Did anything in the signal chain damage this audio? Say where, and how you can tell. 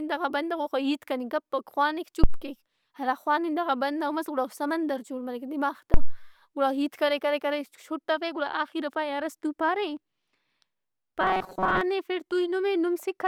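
Yes. Two phantom power thumps come from the analogue wiring stage, at 2.24–2.45 s and 5.94–6.21 s. Supply switching steps through coupling capacitors, decaying in 48 and 60 ms.

From 11.21 to 11.81 s the speech becomes a rigid 188 Hz buzz. This is likely robotic sound from repeated short buffers in the driver stage. Roughly 5.3 ms chunks repeat while most real audio is skipped.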